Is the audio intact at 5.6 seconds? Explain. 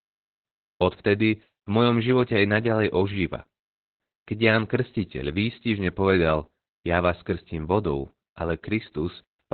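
No. At 5.6 seconds the speech carries Opus voice compression, which runs through the whole clip. Nothing above 4.4 kHz survives, since the coder has narrowed to narrowband. The muffled, hoarse, slightly robotic sound points to SILK linear-prediction coding at a bitrate around 8 kbps.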